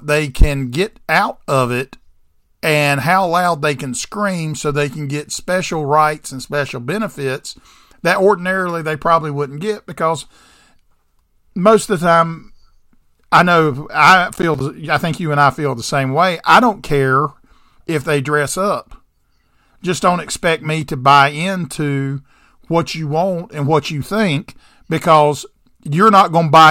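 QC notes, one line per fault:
14.34–14.61 s, processor overload crackle: a brief burst of gritty crackle on the speech as the processor repeatedly missed its deadlines. Several buffers of around 10 ms each dropped to silence with hard edges, and the run of gaps tears the sound until the load passes.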